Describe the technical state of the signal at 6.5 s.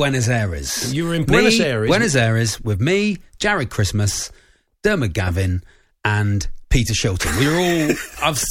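At 6.5 s the speech signal is intact, with no dropout, clipping, glitch or other technical fault to be heard.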